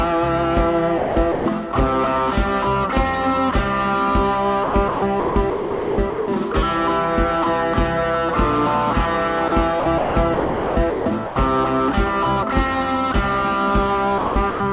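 Call audio with a hard 4 kHz ceiling, which fits G.711 mu-law at 64 kbps. It has sound chopped by the voice detector at 0.98–1.46, 4.64–6.54, 9.80–11.36 and 14.18–14.60 s: the sound flickers between real and synthetic comfort-noise fill, likely from the sender's VAD gating on and off. There's also sound dropped by the voice detector at 9.48–9.52 s, a 40 ms gap filled with steady comfort noise, likely the detector briefly mistaking quiet sound for background.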